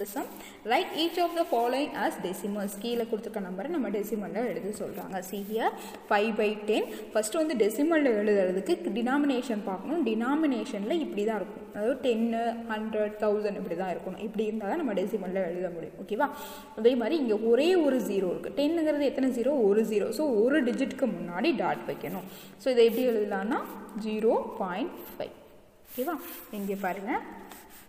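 No technical faults can be heard anywhere in this audio. Nothing in the sound marks a point where anything went wrong.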